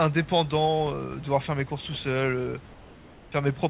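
From 2.72 to 3.32 s, during a pause in the speech, the room's real background gives way for about 0.6 s to a flat, smooth hiss about 3 dB quieter, with none of the texture of the room noise that sits about 24 dB below the speech elsewhere. This is likely comfort noise in place of the background: the sender's voice detector stopped transmission during the pause, and the receiver filled the gap with synthetic noise roughly matched to the background, all within a telephone-band G.711 call path that carries nothing above 4 kHz.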